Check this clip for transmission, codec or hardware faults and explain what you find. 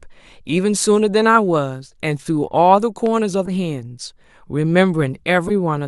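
Two kinds of fault turn up in this speech clip: one loud pop and two corrupt frames decoded.

Between 3.06 and 3.08 s a single sharp pop cuts through, peaking about 5 dB above the speech, while the speech carries on underneath without a break. The likely cause is a sudden voltage step or spike, for instance from a switch, a connector or static discharge, entering the signal chain. The circuitry that follows shapes it into a brief click-like thump rather than a lasting disturbance.

At 3.45 to 3.52 s and again at 5.47 to 5.51 s there are short synthetic blips, each the length of roughly one compressed frame. They are not part of the speech. The first peaks at about −10 dBFS and the second, louder one at about −5 dBFS. These come from damaged compressed frames that the decoder played anyway. The corrupted bits scramble the gains and coded values, so energy lands at the wrong frequencies until the next intact frame arrives.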